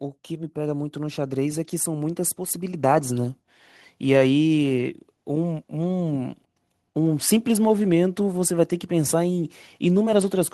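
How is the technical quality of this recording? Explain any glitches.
The recording has one clear fault. Automatic gain rising runs from 0.27 to 3.61 s: the gain control judged the input too quiet and raised its level slowly, by about 12 dB, so the speech and the background noise swell louder together over those three seconds.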